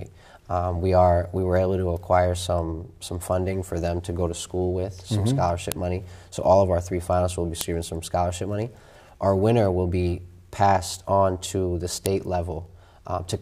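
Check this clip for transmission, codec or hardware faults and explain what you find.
Three sharp clicks stand out, at 5.72 s, 7.61 s and 12.06 s. Each is a file header played as audio. Separate pieces were joined with their headers left in. Those header bytes play as raw samples, so each join snaps loudly, regardless of the surrounding sound.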